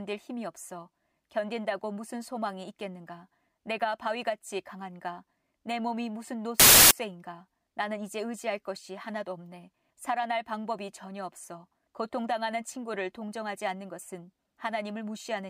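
At 6.60 s the speech is cut by a burst of harsh, very loud white noise lasting about 0.31 s, ending abruptly at 6.91 s. This is file tags played as audio: an embedded cover picture, stored as compressed image data, was read by the decoder as if it were samples. Because compressed data is close to random, it comes out as loud, flat static with hard edges at both ends rather than any structured sound.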